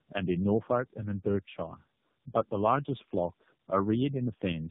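From start to finish the speech has that rough, muffled, warbly quality of tandem speech coding. It sounds like three low-rate speech codecs in a row, likely something like G.729A then AMR-NB twice, each re-coding the last one's damage, with nothing above 3.7 kHz.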